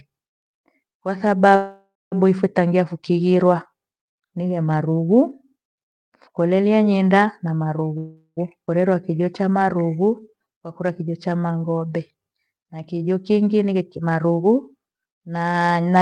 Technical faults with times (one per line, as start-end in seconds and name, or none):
1.55-2.14 call audio freeze
7.98-8.39 call audio freeze
8.67-8.69 skip ahead
8.88-13.04 jitter buffer slow-down
13.11-14.41 jitter buffer speed-up